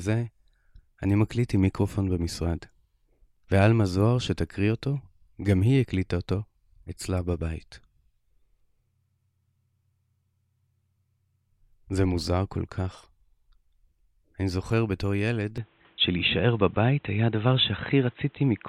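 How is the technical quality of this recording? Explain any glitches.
The recording has one clear glitch near the end. From 15.58 s to the close at 18.68 s, the speech turns dull and boxy, with nothing above 4 kHz, a level shift of about 5 dB and a faint new noise floor, with no gap at the change. The likely cause is an input switched to a poorer device that passes a narrower band.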